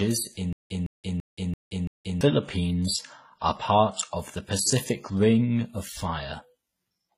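Transcoding between lossy codecs runs through the whole speech clip. Nothing is present above 14.8 kHz. Two kinds of artefact sound at once. The combination points to low-bitrate WMA likely followed by HE-AAC.

From 0.53 to 2.21 s there is a stutter with silent gaps. A 162 ms fragment plays and is followed by about 175 ms of digital silence. The cycle repeats every 337 ms, five times. A stalled stream replaying its last fragment at each retry fits this pattern. The audio meant for that span is lost.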